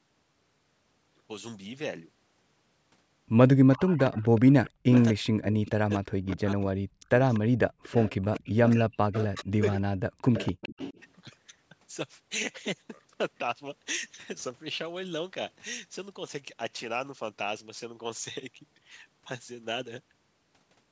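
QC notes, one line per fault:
3.72–5.05 s, 5.68–6.37 s, 7.31–9.44 s and 10.34–11.02 s: echo leak. A faint copy of the speech trails about 249 ms behind, roughly 15–20 dB down, likely a far-end canceller leaving residue.
4.83–6.92 s and 8.11–10.34 s: speech suppressed in double talk. The talker dips by up to around 40 dB for a second and a half or so, likely the canceller ducking overlapping talk.
7.70–7.83 s: background gated by the echo canceller. The room tone drops about 37 dB for a split second while the loudspeaker plays, then snaps back when the canceller releases.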